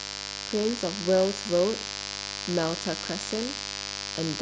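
From start to finish there's a raspy mains buzz on 50 Hz, with switching spikes spraying harmonics up into the kilohertz range, sitting fairly loud just under the speech.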